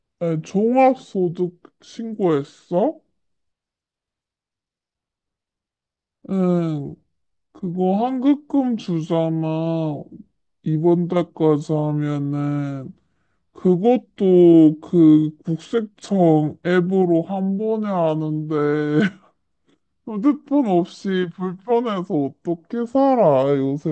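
A wrong sample rate runs throughout the speech, from start to finish. Playback is slower than recording with no conversion, so everything runs at 0.69 times speed and sits about 6.5 semitones low, which fits 32 kHz material played at 22 kHz.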